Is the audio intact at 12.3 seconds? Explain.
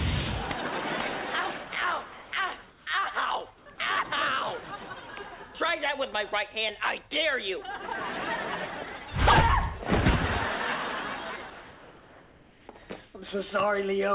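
No. From 11.5 to 12.68 s the real background, about 25 dB below the loudest parts, gives way to comfort noise: a steady, featureless hiss about 2 dB quieter. This is likely discontinuous transmission, with the receiver synthesizing noise while the sender pauses.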